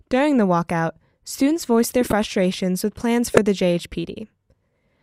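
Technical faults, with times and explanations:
2.01–2.13 s and 3.32–3.38 s, corrupt frame decoded: damaged frames after "walkout students voiced their" and "with plans" play as squeaky bursts, showing as misplaced spectrogram blocks and waveform spikes peaking near -10 and -5 dBFS.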